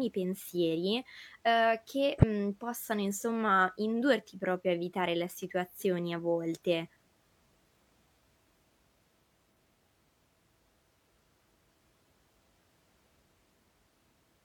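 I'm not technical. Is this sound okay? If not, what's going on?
No, there's one glitch. At about 2.14 s, running to 2.24 s, some compressed frames are skipped. A small piece of the file never gets played, either because it's missing or because the player threw it out as damaged. Roughly a twentieth of a second of speech is lost, and the audio jumps forward.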